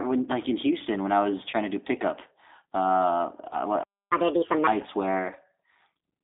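Throughout the speech there is a narrow, slightly rough and synthetic quality, with nothing below about 250 Hz or above 3.7 kHz. That is the G.729 codec at 8 kbit/s. It does not send the waveform itself. It rebuilds each 10 ms frame from a vocal-tract filter, a pitch predictor and a handful of pulses, and with this little data the damage is plainly audible.

At 1.51 to 1.54 s, just after "when I was", the speech briefly turns into a smeared, stretched sound that sags in level before normal sound resumes. This is VoIP packet loss concealed by the speech codec. About 20 ms of audio went missing, which fits a single lost packet. The decoder filled the gap by repeating its last pitch and filter settings at falling gain, and because each frame builds on the one before, the voice stays weak or distorted for a short while after. The same thing happens at 3.49 to 3.57 s, right after "to do pickup uh", where a similar 20 ms loss leaves a stretched, fading sound lasting a little longer while the decoder recovers.

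From 3.83 to 4.11 s the sound simply stops mid-flow for about 280 ms. This is a playback stall: the output falls silent and then carries on. The likely cause is that the player ran out of buffered data or its audio thread was briefly held up.

Straight after, from 4.11 to 4.67 s, the speech rushes forward, sounding hurried and noticeably higher, by roughly seven semitones. This is catch-up at higher speed. The player resamples its backlog at 1.5 times normal speed to win back the time lost in the stall, which raises speed and pitch together.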